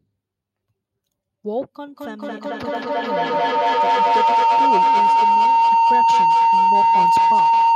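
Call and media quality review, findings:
Feedback howl from 1.87 s to end of clip. Tone near 1 kHz, repeating roughly every 200 ms, peaking about 11 dB above speech. Two endpoints sharing one room; mic-to-speaker loop gain above unity, repeats growing and narrowing to one frequency.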